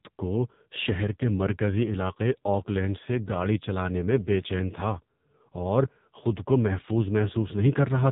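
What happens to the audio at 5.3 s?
At 5.3 s, as throughout the whole clip, the speech carries heavy AMR narrowband mobile codec damage: a vocal-tract model rebuilt from sparse pulses makes it buzzy and synthetic, fitting a bitrate near 6 kbps. A spectrogram shows nothing above 3.8 kHz, a flat empty ceiling.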